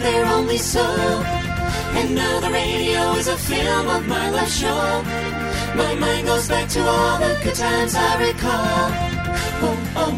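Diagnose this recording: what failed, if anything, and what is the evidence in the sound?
Nothing in the signal chain has failed: the audio holds continuous level and timing throughout, with no dropouts, discontinuities, distortion or interference anywhere in the recording.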